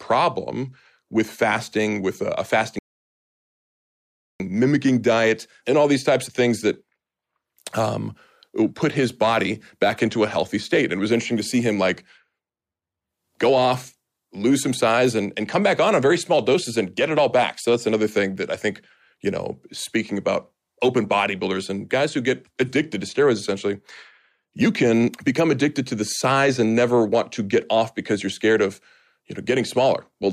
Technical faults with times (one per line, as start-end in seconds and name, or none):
2.79-4.40 rebuffering stall